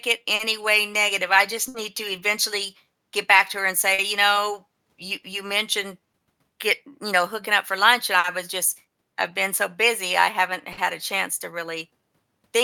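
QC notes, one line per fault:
Throughout: clock drift between sender and receiver. The sending end's clock runs roughly 4 percent slow against the receiving end, so the jitter buffer keeps draining and must be topped up. This shows as small timing hiccups scattered unevenly across the whole clip, not one isolated glitch. Unlike a single late packet, the cause never goes away, and every correction leans the same way: adding time, never removing it.
0.97 to 12.40 s: repeated timing corrections. To keep pace with the slow sender, the receiver plays this stretch at 98 percent speed, inserting small repeated or stretched slivers that add up to around 0.3 s. Each edit is tiny and the spacing is irregular. The edits are spread out, unlike a stall, which is one held moment with a clear start and end.
0.35 to 0.42 s, 1.68 to 1.77 s, 3.94 to 4.02 s, 8.19 to 8.27 s and 10.73 to 10.81 s: short stall from a late packet. 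Each time, a packet arrived late, the buffer ran dry, and the receiver held the last sound for 40 to 60 ms before resuming from exactly where it stopped. Nothing is lost, only delayed, so a sound is briefly frozen with a slight buzz or dip. This is a single hold rather than a gap or skipped audio, and it is distinct from the diffuse drift corrections.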